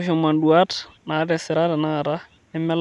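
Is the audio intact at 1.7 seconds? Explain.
Yes, at 1.7 seconds the speech plays through cleanly, with no dropout, click, glitch or other fault at that moment.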